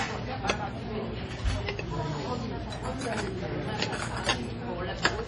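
An everyday sound recording with heavy MP3 compression throughout, likely from a very low bitrate of around 32 kbps. Nothing remains above 10.6 kHz, so on a spectrogram the energy stops at a flat, hard ceiling, and below it weak frequency lines flicker on and off from frame to frame as scattered holes. That dropout gives the audio a watery, swirling texture, and transients lose their sharp edges in the waveform.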